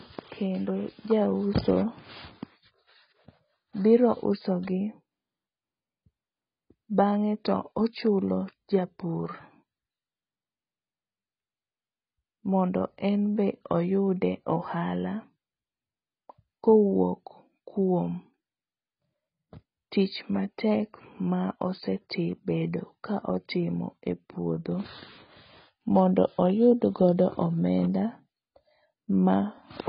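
Heavy AAC compression is the likely cause of damage running through the whole speech recording, at a bitrate low enough to point to around 16 kbps. The encoder cuts everything above 5.1 kHz, so sibilants lose their edge and the audio sounds dull, smeared and warbling.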